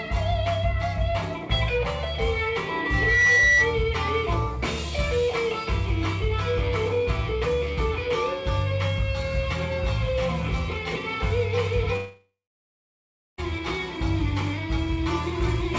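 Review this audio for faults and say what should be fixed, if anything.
From 2.44 s to 3.75 s a single 2 kHz tone swells over roughly 0.7 s into a piercing squeal that sits about 10 dB above the rest of the audio before cutting off. This is loudspeaker feedback squeal: the microphone hears the loudspeaker it drives, and at 2 kHz the loop gain passes one, so the tone keeps feeding itself. Fix it by lowering monitor gain, moving the microphone off the speaker's axis, or notching 2 kHz.

At 11.96 s the sound smears into a buzzing continuation that fades, then gives way to about a second of silence before the audio returns at 13.40 s with roughly 1.4 s of material simply gone. The pattern points to a long network dropout as the likely cause: nothing reached the receiver, which stretched the last sound briefly and then went quiet, resuming from later in the stream. Fix it by stabilising the connection and adding redundancy or forward error correction on the call path.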